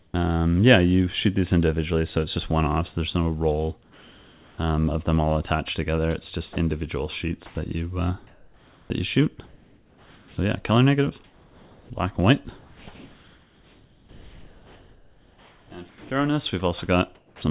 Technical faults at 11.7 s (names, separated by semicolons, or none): comfort noise in place of the background